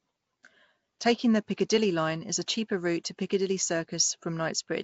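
Throughout, the speech has a rough, hissy halo and a smeared, underwater quality. Nothing is heard above 7.7 kHz. This is likely Nellymoser compression, whose quiet bands get no bits and are filled with noise. The damage is plainly audible and fits a 32 kbps stream.

At 3.04 s, a brief hiss of about 11 ms comes just before a sharp attack. This is pre-echo. The codec spread noise sized for the loud attack over its whole block, filling the quiet moment before it. The attack sounds soft and smeared.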